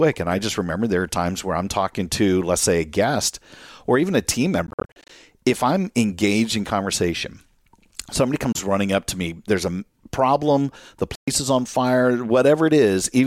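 Audio packets likely arrived too late at the headphones and were dropped, a Bluetooth dropout. After "or even a team", 4.67 to 5.10 s breaks into scattered holes totalling 240 ms. A 27 ms gap at 8.52 s precedes "running up to me". Between "there's a problem the" and "is on fire", 11.15 to 11.28 s goes silent. Each time the sound resumes further on.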